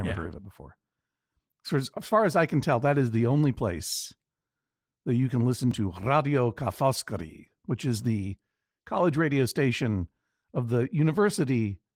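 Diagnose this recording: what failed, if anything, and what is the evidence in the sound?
Right after "that you can listen", at 5.71 s, the speech jumps forward a touch with no gap, just a few milliseconds missing and the two sides butted together. That's the signature of a dropped buffer (overrun) at the driver or buffer stage, likely the capture side not reading its block before the hardware wrote over it. The Opus coding layered on top is light.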